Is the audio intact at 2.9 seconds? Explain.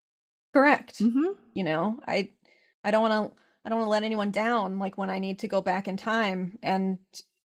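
Yes, the speech at 2.9 seconds is intact, with nothing at that moment beyond the light coloration of the 20 kbps Opus voice coding that runs through the clip.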